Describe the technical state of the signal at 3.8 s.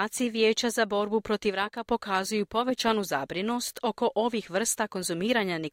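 At 3.77 s, right after "pokazuju povećanu zabrinost" and before "oko ovih", there is a bit error spike. A single flipped bit throws one sample to about -11 dBFS, producing a lone broadband tick. Unlike an edit click or dropout, nothing is lost or shifted around it.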